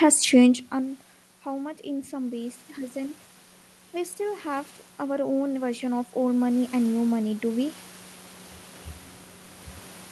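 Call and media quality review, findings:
Automatic gain rising, 1.44–3.24 s (just after "changed and") and 3.92–7.79 s: AGC chasing an input that dropped about 18 dB, adding about 3 dB, then about 9 dB, so voice and room noise swell together.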